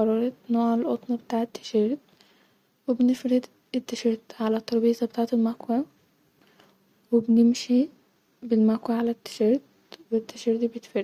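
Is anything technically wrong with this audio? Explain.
No, nothing in this speech recording points to a technical fault.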